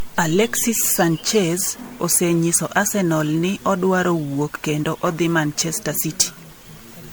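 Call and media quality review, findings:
Generation loss throughout; likely repeated MP3 re-encoding, around seven passes, fits 96 kbit/s. Speech swirly, smeared and hollow, attacks blurred; nothing above 20.1 kHz.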